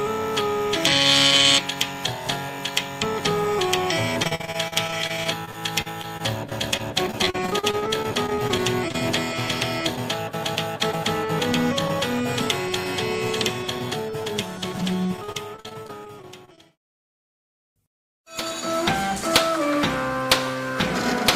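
From 4.23 to 8.96 s, and again from 15.17 to 17.41 s, you get repeated packet loss, the robotic sound kind. Packets keep going missing, and each hole gets papered over by stretching the last bit of audio, then the next hole arrives right behind it. The gaps are short, none longer than about 50 ms, but about a sixth of each stretch is concealment, so it comes out choppy, with pieces missing.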